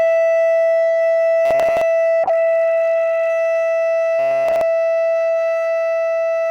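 From 1.45 to 1.81 s the music collapses into a rigid, metallic drone pitched at 133 Hz. This is robotic sound from repeated short buffers. Fresh audio is likely arriving too seldom, so most of that stretch is filled by looping a fragment about 7.5 ms long, and the loop rate imposes its own fixed pitch. Unlike a bitrate drop, the fault adds a steady buzz that ignores the music's actual pitch.

Between 2.25 and 3.37 s a call bitrate drop takes hold. The sound goes muffled and watery, with its upper frequencies stripped away, and stays at its worst for about 1.05 s before clarity returns. That points to the encoder being forced from roughly 96 kbps down to about 18 kbps and coding far more coarsely. No fixed pitch is imposed here. The music still moves naturally but sounds dulled and smeared, which separates this from the robotic buzz.

From 4.19 to 4.61 s the same 133 Hz robotic buzz returns, this time filling the whole stretch with repeated buffers, so none of the real music comes through until it ends.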